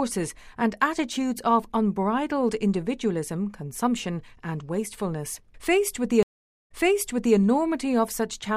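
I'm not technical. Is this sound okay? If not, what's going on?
No. At 6.23 s a stream reconnect cuts the sound for 0.48 s after the connection drops. Playback then resumes 0.66 s earlier, repeating a moment until about 7.37 s.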